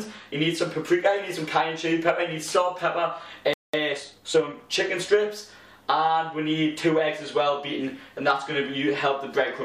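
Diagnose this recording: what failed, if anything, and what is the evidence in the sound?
The failure is at the playback stage. At 3.53 s the sound cuts to silence mid-flow and stays dead for about 200 ms, resuming at 3.74 s. That's a playback stall. The gap is clean, with no glitchy remnants, so the output simply had nothing to play. The likely cause is the player's buffer running dry or its audio thread getting blocked, leaving it waiting until data arrived again.

Right after the stall, from 3.74 to 4.54 s, the audio runs hurried at about 1.25 times normal speed, yet the pitch doesn't rise. That's time-compressed catch-up. The player is clawing back the backlog the stall created by snipping out tiny slices and cross-fading across the joins, which keeps pitch intact.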